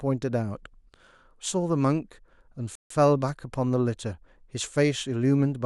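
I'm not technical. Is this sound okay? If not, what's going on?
No. At 2.75 s the speech stops dead and goes silent until 2.90 s. This is a rebuffering stall. The player ran out of downloaded audio and waited for more. Then it picked up exactly where it stopped. Nothing is missing, but about 150 ms of silence was added.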